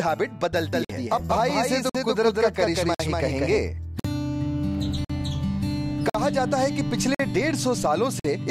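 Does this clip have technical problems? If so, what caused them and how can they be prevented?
Yes. From 0.73 s to 3.58 s a doubled audio track is heard: a second full-band copy about 200 ms late, at roughly the same level, with no decay, starting and stopping abruptly. It is likely a second, slower capture path mixed in. Monitor and record from a single path, and mute any duplicate input.

There is also a gap between chunks: 50 ms silent holes at 0.85, 1.90, 2.95, 4.00, 5.05, 6.10, 7.15 and 8.20 s, one after every 1 s chunk, so each join is interrupted. Remove any codec padding and schedule each chunk to start exactly where the previous one ends.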